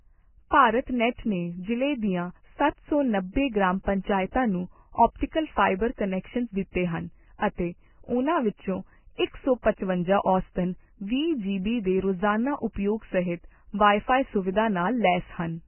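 From start to finish, the speech has heavy damage that is likely Vorbis compression at a very low bitrate, near 10 kbps. Nothing remains above 3 kHz. Coarsely quantised treble turns into grainy hiss. Tones sound rough and attacks blur.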